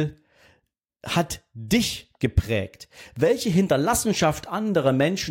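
No technical fault is audible anywhere in the recording.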